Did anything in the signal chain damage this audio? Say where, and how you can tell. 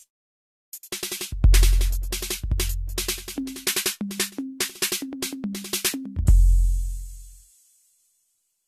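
Yes, at the codec stage, and the damage runs through the whole music clip. It sounds swirly and hollow, with smeared transients and blurred attacks, and nothing is left above 14 kHz. That is more degradation than a single lossy pass would leave, which fits generation loss. The audio was likely decoded and re-encoded as AAC-LC around 64 kbit/s about five times. Each pass quantised on a shifted frame grid, so noise and spectral holes piled up.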